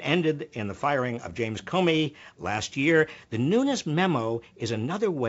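Nothing stood out on listening to this speech clip, which sounds as expected for wideband telephone audio.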